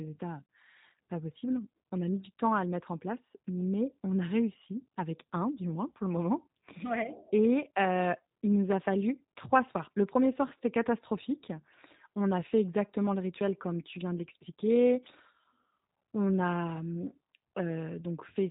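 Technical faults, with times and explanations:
Throughout, G.729 codec: speech rebuilt from a vocal-tract filter and sparse pulses sounds rough and synthetic, with nothing above 3.8 kHz, as an 8 kbit/s codec would produce.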